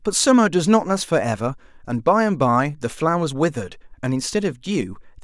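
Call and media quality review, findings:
No capture, network or playback faults found in the speech signal; levels, timing and continuity show no defects attributable to any component in the call path.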